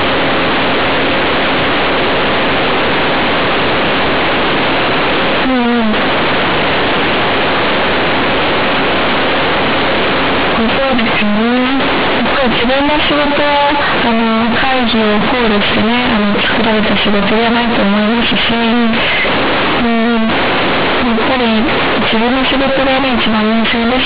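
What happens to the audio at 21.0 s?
At 21.0 s, as through the whole clip, the fault is companded audio read as linear: A-law bytes are played as plain 8-bit samples without expansion, so every sign change swings wildly and quiet speech blares like loud speech, producing harsh, buzzy distortion with heavy noise in pauses.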